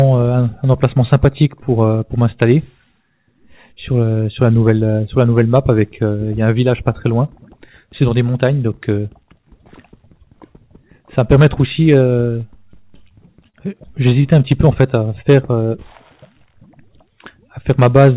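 From 12.82 to 13.56 s there are repeated stalls (stutter): the jitter buffer ran dry four times, and about 61 ms in total was filled by extending the preceding sound. The longest gap is 28 ms. Nothing is lost, but the audio drags and stutters.

Between 14.10 and 14.23 s, a short stall from a late packet holds one sound for an extra 16 ms, with a slight buzz or dip. The receiver then lifts its delay by 16 ms.

From 14.65 to 15.86 s, a jitter buffer slow-down adds 66 ms by repeating pitch periods. The audio plays at 95% speed without changing pitch, so sounds are drawn out. All of this sits on a call path with no content above 4 kHz, which fits G.711 telephone coding.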